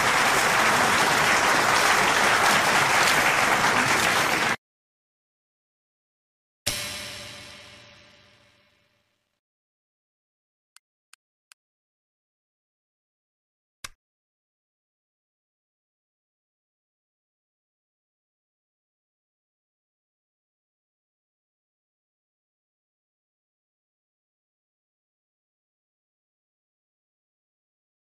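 No technical faults are audible.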